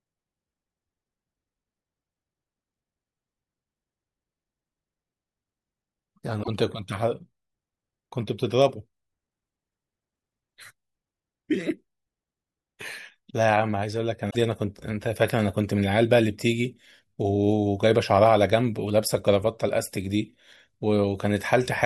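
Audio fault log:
6.42–6.49 s and 14.27–14.36 s, damaged data in a compressed stream: corrupted bytes make the decoder misread frames and lose sync. Each break is a short glitch in the speech.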